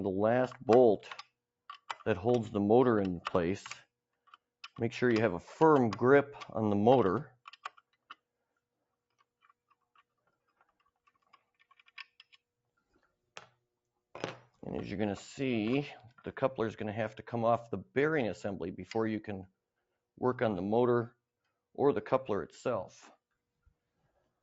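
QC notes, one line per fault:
7.64–8.14 s, sound cut by the noise suppressor: the level sags by up to about 13 dB for roughly 150 ms in total, thinning steady or fading parts, because the call's suppressor mistook this sound for noise; the call's microphone processing, working normally, caps content at 8 kHz.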